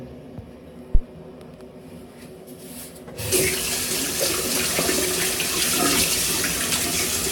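At 0.95 s to 1.01 s a supply, most likely phantom power, is switched on or off on a live input and the voltage step passes through the coupling capacitors, giving a phantom power thump: a deep low-frequency bump peaking at about -4 dBFS and dying away within roughly 13 ms.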